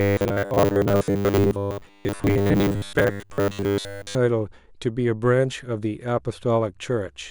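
From 0.01 to 4.15 s, robotic sound from repeated short buffers: a rigid 100 Hz buzz, likely from a 10 ms block being looped for roughly two-thirds of the time.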